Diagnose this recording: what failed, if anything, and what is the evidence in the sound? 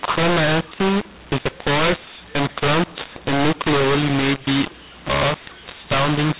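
Harsh, gritty speech throughout, with levels jumbled and pauses filled with hiss instead of silence, inside a 4 kHz telephone band. At the codec stage, mu-law and A-law are mixed up: G.711 bytes written as mu-law were decoded as A-law, mapping each code to the wrong amplitude and lifting near-silent samples.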